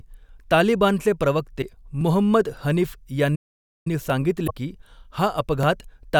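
Clock drift buffer slips run from 0.51 s to 5.63 s: about four clicks recur every 1.58 s while the speech continues. Two devices' clocks likely disagree by roughly 700 parts per million, so the buffer between them drifts until a few dozen samples are dropped or repeated.

Damaged data in a compressed stream appears at 1.58 to 1.64 s as a brief glitch. The decoder hits corrupted frames, loses sync and hunts for the next valid header, so the sound blips.

A playback stall from 3.35 s to 3.87 s cuts the audio to silence for about half a second mid-flow before it resumes. The player likely starved for data or had its output thread blocked until it recovered.

A second burst of damaged data in a compressed stream follows at 4.44 to 4.51 s, with another brief glitch as the decoder resyncs.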